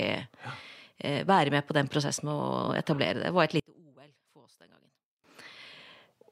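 A speech recording in which, from 3.60 s to 5.24 s, the speech suddenly drops by about 30 dB, leaving only a faint residue before the full level returns. The likely cause is one channel inverted: with one side of the stereo pair in reversed polarity, everything common to both channels cancels when they are summed to mono, so the centred speech and its low end almost disappear and only the small difference between channels survives.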